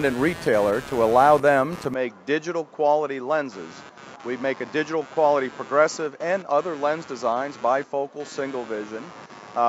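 A computer activity noise runs under the whole clip: a buzz pulsing at around 100 times a second, sitting roughly 20 dB below the audio. It comes from the machine's load shifting the audio circuit's shared ground, so it tracks what the processor, graphics card or mouse are doing rather than anything in the sound itself.

From 1.94 s to the end the character changes. Nothing above 7.6 kHz survives, the level drops by around 5 dB, and a new noise floor appears roughly 40 dB down. There's no gap at the changeover. That pattern likely points to the input being switched to a poorer device, such as another microphone or a headset's call profile, with its narrower band, own tone and own background noise taking over partway through.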